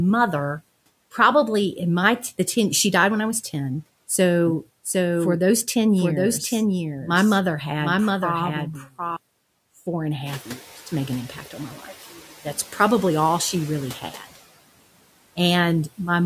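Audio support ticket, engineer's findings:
Noise suppressor artifacts, whole clip. Background pulled down about 18 dB between phrases, returning under speech. Spectrogram: noise floor pumping with speech envelope. Component: noise suppressor, per-frame band gains.

Doubled audio track, 4.47 to 9.17 s. Full-band second copy trailing roughly 0.7 s, about 5 dB down, starting and stopping abruptly, no reverb tail. Waveform: shifted replica of envelopes. Spectrogram: ghost harmonics offset in time. Likely a second slower capture path mixed in.

Speech cut by the noise suppressor, 8.81 to 8.93 s and 14.01 to 14.37 s (after "probably all she really"). Speech swallowed, drops up to about 15 dB over roughly 0.1 s and 0.15 s. Suppressor misclassifying speech as noise.

Noise suppressor catching up, 10.26 to 10.48 s, between "four and a" and "years to make an". Room noise steps up about 13 dB near 10.5 s; estimate lags, only about 5 dB cut initially, settling over 220 ms. 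Spectrogram: floor brightens, then fades.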